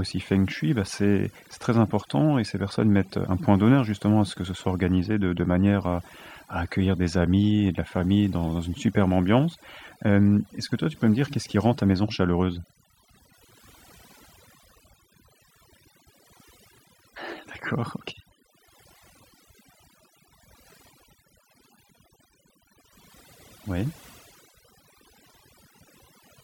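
From start to finish the recording carries overdone noise removal, meaning a noise reducer was pushed far too hard on what was a noisy take. It clamps individual frequency bands down to nothing whenever they sit close to its noise estimate, and it can't tell the quieter parts of the voice from the hiss, so those vanish too. You get a lowered background flecked with twinkly specks.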